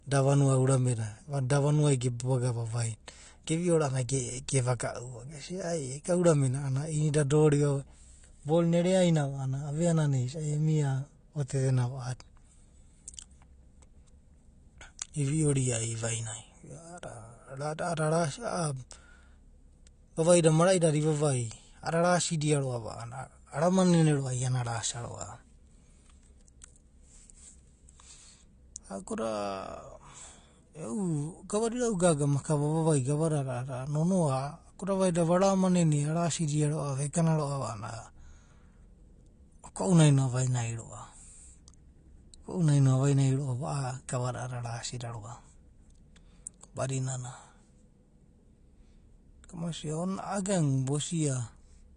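Throughout the speech, nothing sounds above 9.9 kHz and sibilants smear into a fizzy warble, likely AAC compression, fitting a bitrate around 32 kbps.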